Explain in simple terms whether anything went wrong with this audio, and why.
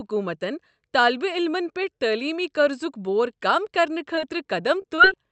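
Short concealed packet loss happens three times, at 4.15–4.19 s, 4.82–4.86 s and 4.96–5.00 s. Small pieces of the call arrived too late. The receiver filled each gap by stretching nearby sound, which causes brief smears or wobbles.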